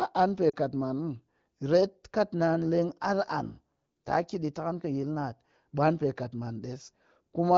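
At 0.49 to 0.56 s, between "an pe" and "kat maan", there are lost AMR speech frames. About 40 ms of speech, which fits two frames, failed to arrive intact, so the decoder filled the gap by repeating the last good pitch and spectral shape at falling gain. It sounds like the voice dropping to near silence before it returns rough for a moment. A spectrogram shows harmonics frozen flat, then fading. The waveform shows a short amplitude sag, within otherwise clear wideband sound up to 7 kHz.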